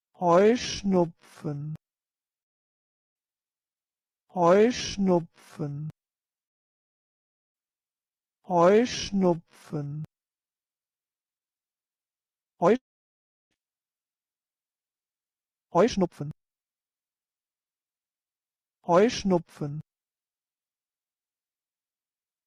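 From 12.76 s to 13.53 s the sound breaks off, trails briefly into a fading buzz, then falls silent for about 0.71 s before resuming with about 0.76 s of material lost. A long network dropout is the likely cause, with the receiver concealing the gap.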